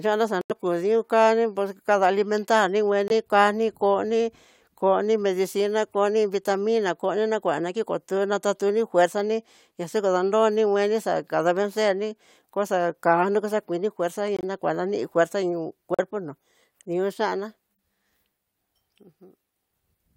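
Corrupt frame muted at 0.41 to 0.52 s: damaged compressed frames were rejected by the decoder, and the player filled the gap with silence. The speech drops out abruptly for about a tenth of a second, a span that suggests several consecutive frames were lost, and then resumes in step with no timing slip. The same fault leaves shorter holes at 3.08 to 3.12 s, 14.37 to 14.44 s and 15.94 to 16.00 s, each a sudden cut to silence.

Corrupt frame decoded at 6.54 s: here a frame with flipped bits slipped through, and the decoder played it. Misread gains or codes placed energy at the wrong frequencies for roughly one frame's length. The result is a brief chirp, squeak, blip or burst of noise, peaking around -30 dBFS, rather than a silent gap.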